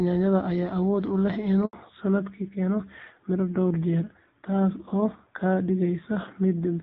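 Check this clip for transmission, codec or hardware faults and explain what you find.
Two linked transmission faults occur a little over a second and a half in: a brief dropout followed by a permanent loss of bandwidth.

The handover gap runs from 1.65 to 1.73 s, a silence of 80 ms. While the call was passed from one network link to another, no speech frames reached the receiver, so the voice fades out within a few tens of milliseconds and nothing fills the hole until the new link takes over. Unlike scattered packet loss, there is no concealment smearing and no repeated fragments, only a single clean silence. What it marks is the switch itself, because the sound that resumes afterward is duller.

The fallback to narrowband starts at 1.73 s and lasts to the end. Before the gap, the audio has the wideband HD Voice character, with light coding damage that fits AMR-WB at around 12.65 kbit/s. 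After the handover, nothing above 4 kHz remains, and the voice turns muffled and rougher, which fits a drop to AMR-NB at around 7.4 kbit/s. A plain low-pass filter would dull the sound without that added raspiness, and it would not begin exactly where the link changed.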